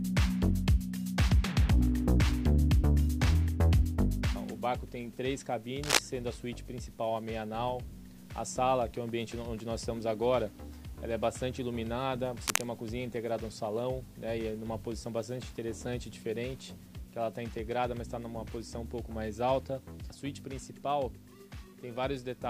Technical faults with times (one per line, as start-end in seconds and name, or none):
5.83-5.99 cable scratch noise
12.47-12.63 cable scratch noise